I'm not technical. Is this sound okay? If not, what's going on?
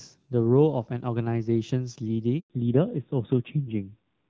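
No. Two things go wrong, one right after the other. The first is a handover gap at 2.40 s. The phone switched the call from one network to another. For 0.1 s, no speech got through during that switch. The voice fades out quickly and goes silent. Then it comes back. Whatever was said in that tenth of a second is simply lost.

The second is a fallback to narrowband, from 2.50 s to the end. Up to the gap, the call uses HD Voice and the speech sounds clear. After the switch, the call drops to an older, lower-quality phone codec. Everything above 4 kHz disappears. That top range carries crispness, like the hiss of s sounds. So the voice turns duller and rougher, like an old landline.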